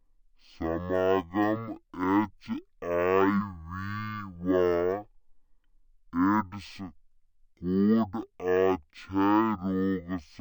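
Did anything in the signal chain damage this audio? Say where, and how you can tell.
Yes: stereo read as mono, at sample-format conversion. Interleaved left and right samples play as one channel, so the speech runs at half speed, an octave low, with a faint mirrored copy in the spectrogram's upper half.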